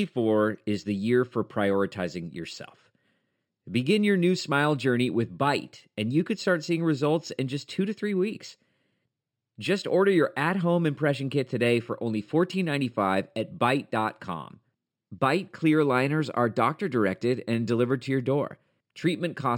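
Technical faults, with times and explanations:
throughout: imaging from linear upsampling. The speech was raised from 12 kHz to 44.1 kHz by straight-line interpolation between samples. This weak filter dulls the top of the band and leaves a mirrored image from 6 kHz to 12 kHz, roughly 30 dB down, heard as a faint metallic shimmer on sibilants.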